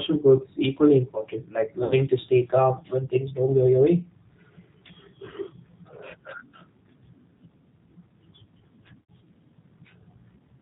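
Throughout, the speech has passed through the G.729 codec, which fits an 8 kbit/s G.729A stream. The codec rebuilds each 10 ms frame from a vocal tract filter, a pitch predictor and a few sparse pulses, discarding everything above 4 kHz. The result is plainly audible damage: a dull, band-limited sound with a rough, slightly synthetic quality.

At 1.84 s, between "is equally important like" and "to stay calm when", about 60 ms of audio went missing, which points to three lost 20 ms packets, and was covered by VoIP packet loss concealment by the speech codec. The decoder kept extending its last pitch and filter while turning the gain down, so the sound smears into a fading buzzy tone or coloured noise until 1.94 s. The same happens at 9.01 s, with about 80 ms missing, consistent with four packets. There the stretched, decaying sound lasts until 9.11 s, and the voice resumes weak or distorted because each rebuilt frame leans on the previous one.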